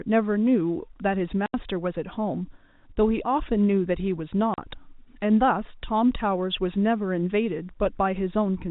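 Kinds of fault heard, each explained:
Packet loss filled with silence: Some packets never arrived, and the receiver played silence in their place. The speech cuts out for 80 ms at 1.46 s and for 40 ms at 4.54 s. Both gaps fit whole 20 ms packets. Their edges are abrupt.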